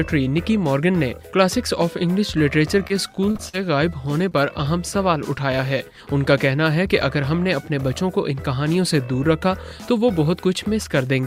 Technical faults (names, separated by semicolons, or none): short concealed packet loss